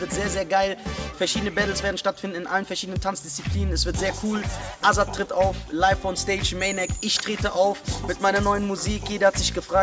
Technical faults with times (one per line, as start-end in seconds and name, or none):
none